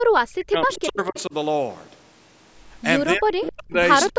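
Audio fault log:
0.28–1.34 s, 3.16–3.77 s and 4.12 s to the end: speech suppressed in double talk. The voice dips hard, as much as around 40 dB. That's likely the echo canceller ducking everything while both ends talk at once.
0.73–0.81 s and 1.16–1.21 s: echo leak. A faint copy of the voice comes back about 263 ms late, roughly 20 dB under the speech. It's likely far-end loudspeaker pickup that slipped past that side's echo canceller.
1.70–1.93 s: loose connector crackle. There's a short, irregular burst of scratchy crackle, the sound of a dodgy contact rapidly making and breaking so the signal gets chopped up.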